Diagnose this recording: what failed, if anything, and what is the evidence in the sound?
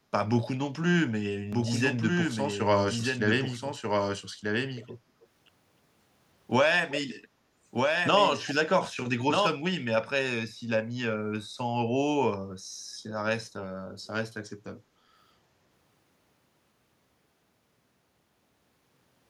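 A second copy of the audio has been mixed into the recording, likely at a storage or editing stage where two takes were left out of step, or where a slower capture path was recorded alongside the first. This doubled audio track runs from 1.53 s to 9.47 s. The speech is trailed by a full-band duplicate roughly 1.5 s behind and about 5 dB quieter. It has no room tail, and it starts and stops abruptly at those two points.

Call processing also failed. An echo leak most likely came from a far end listening on a loudspeaker, whose echo canceller let part of the returned voice through. Short scraps of speech return 317 ms late at 4.75 to 4.98 s, 5.20 to 5.27 s, 6.89 to 7.00 s and 8.44 to 8.54 s. Their level varies a lot. The scrap at 5.20 s is barely audible, and the one at 6.89 s is fairly prominent.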